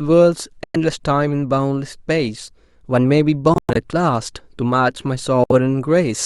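A wireless link that likely lost audio packets on the way to the headphones, a Bluetooth dropout, leaves three abrupt silences in the speech: about 0.11 s from 0.64 s, a broken stretch from 3.54 to 3.76 s where about 0.15 s goes missing in short holes (the longest about 0.11 s), and 64 ms at 5.44 s. Each time, the speech resumes further along, as though it had kept playing unheard.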